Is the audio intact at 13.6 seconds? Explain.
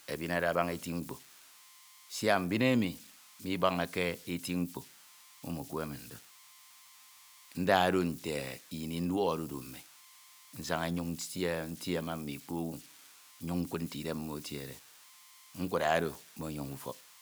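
No. Converter idle tones run through the whole clip, including 13.6 s. An undithered delta-sigma converter settles into repeating bit patterns on small input, producing a whistle near 1 kHz and grainy noise, about 22 dB below the speech.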